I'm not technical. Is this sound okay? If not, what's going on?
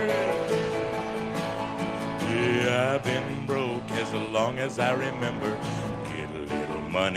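Yes, no audible faults here.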